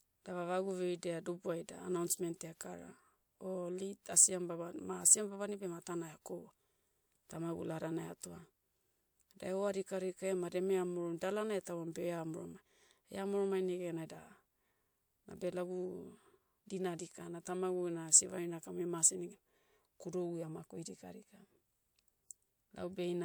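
Speech recording, and nothing is technically wrong with it.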